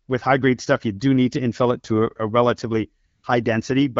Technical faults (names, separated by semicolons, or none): AMR comfort noise